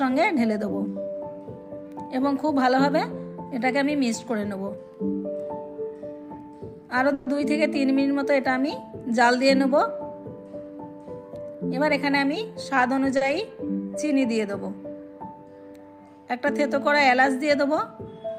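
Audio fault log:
7.13–7.28 s, call audio freeze: the sound is held as a fading buzz or hiss for about 130 ms, likely because packets were delayed and the jitter buffer emptied. Nothing is lost; playback resumes where it stopped. On a spectrogram, smeared repeating bands taper off, then a clean restart.
11.55–13.16 s, jitter buffer speed-up: playback runs about 8% fast at unchanged pitch as the receiver trims many short pitch-period slices, roughly 150 ms in total, to shed excess buffered delay. The waveform shows periodic cycles of unchanged length with tiny splice points and no spectral shift.
13.17–13.23 s, short stall from a late packet: a packet missed its slot, so the last sound is stretched by 40 ms before continuing from the same point. It is heard as a brief held sound with a slight buzz or dip, and appears on a spectrogram as a short flat, horizontally extended patch.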